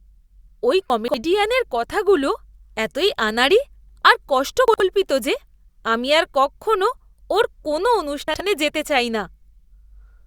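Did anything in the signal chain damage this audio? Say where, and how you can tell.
Yes. Chunks out of order, at the network or buffer stage, at 0.9 to 1.14 s, 4.68 to 4.8 s and 8.28 to 8.4 s. The speech jumbles briefly. On a spectrogram, formant tracks break and resume out of sequence, with thin broadband vertical lines at each hard join. The waveform shows abrupt steps there. The segments divide into 60 ms chunks, with one chunk played three slots late in the first event and one slot late in the others. That fits a jitter buffer releasing packets in the wrong sequence.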